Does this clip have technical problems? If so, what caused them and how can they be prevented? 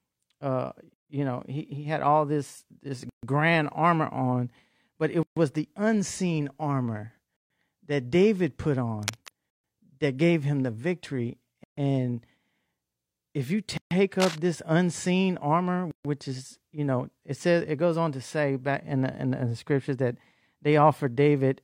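Yes. Gaps at joins of encoded pieces open every 2 s, at 0.94, 3.09, 5.23 (between "but it" and "the unseen armor that"), 7.37, 9.50, 11.64 (after "gave him the victory"), 13.77 and 15.91 s. The first lasts 157 ms and the rest 136 ms each. Separately encoded two-second pieces were joined with each encoder's start-up delay and final-frame padding left in, so the speech drops out, with softened edges, and then resumes where it stopped. To prevent this, encode the whole recording in one pass, or trim each piece's encoder delay and padding before joining.

Cable scratch noise appears at 9.03 to 9.33 s, about 10 dB below the speech and just before "that gave him the", and again at 14.20 to 14.39 s, about 5 dB below. It sounds like dense, uneven rustling laid over the speech, likely from a worn cable, connector or control being moved and its contact resistance fluctuating. To prevent this, replace or clean worn connectors and cables, and keep them still while recording.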